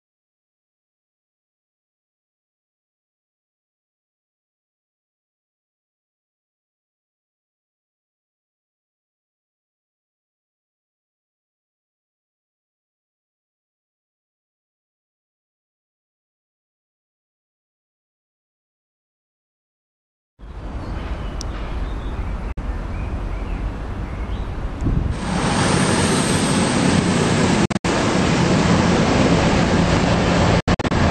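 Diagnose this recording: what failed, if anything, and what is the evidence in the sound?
Bluetooth dropout at 22.52 to 22.59 s, 27.65 to 27.86 s and 30.60 to 30.92 s. The sound cuts abruptly to silence and resumes further along, as though it had played on underneath. About 46 ms is missing at first, then about 139 ms and 163 ms spread across clusters of short holes, none longer than 70 ms. This points to the wireless playback link, likely audio packets reaching the headphones too late and being dropped.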